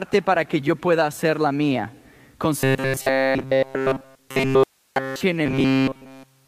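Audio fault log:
2.61–5.21 s and 5.46–6.47 s: robotic sound from repeated short buffers. Nearly all the sound is replaced by loops of a segment about 7.5 ms long, likely from audio arriving too seldom. This imposes a fixed 133 Hz metallic buzz. Unlike distortion or a comb effect, the original material is skipped, not merely coloured.
4.64–4.96 s: audio dropout to a faint residue. The signal cuts abruptly for 327 ms, leaving only hiss about 45 dB below normal level, which points to a live path that likely lost its input. Unlike a pause or fade, there is no decay, and the hiss persists through the gap.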